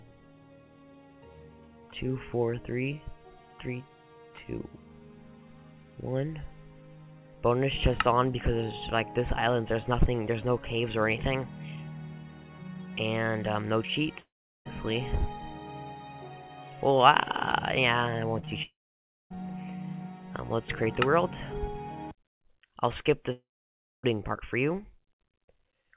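At 14.2 to 14.67 s the audio cuts out in what sounds like a long network dropout, likely a stalled stream. The last sound trails off as a brief fading buzz, then about 0.39 s of near silence before it resumes with that chunk simply gone.

Then at 18.39 to 18.45 s and again at 18.45 to 18.49 s there's short concealed packet loss. These are two back-to-back gaps of a few hundredths of a second that the receiver patched by extending the preceding sound. You hear a quick smear or wobble.

Right after, two more long dropouts follow the same pattern, at 18.63 to 19.36 s with roughly 0.58 s of silence and at 23.32 to 24.05 s with about 0.6 s. Each one has a short fading tail, then dead air, and the audio comes back with the middle missing.

Throughout, the G.711 mu-law call path at 64 kbps keeps everything below 4 kHz.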